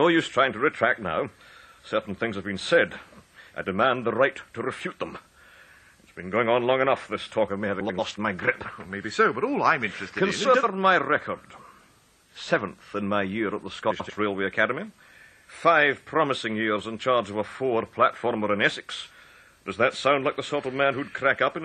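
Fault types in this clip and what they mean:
Frames out of order: adjacent 93 ms blocks swap at 7.80, 10.44 and 13.90 s, causing garbled flutter; unlike dropouts, no time is lost.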